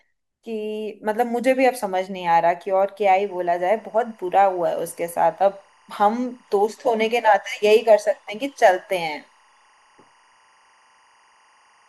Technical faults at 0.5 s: none

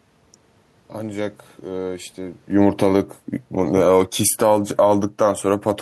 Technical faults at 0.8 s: none

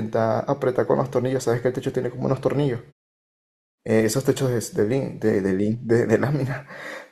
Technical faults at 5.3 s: none

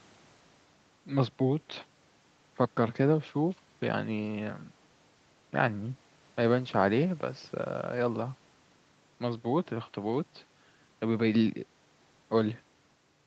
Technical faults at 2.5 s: none

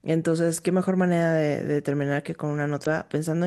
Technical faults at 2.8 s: damaged data in a compressed stream

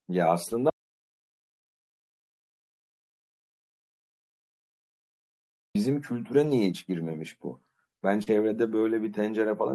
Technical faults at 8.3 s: short concealed packet loss; lost packet rebuilt from error correction

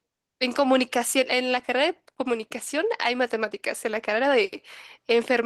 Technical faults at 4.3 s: none

